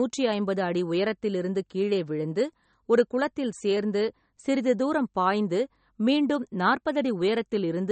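Throughout the speech, the treble stops dead at about 8.4 kHz. Quiet detail flickers in and out, giving a watery, swirly texture. S sounds turn metallic. This plainly audible damage is likely MP3 compression, and fits a bitrate around 34 kbps.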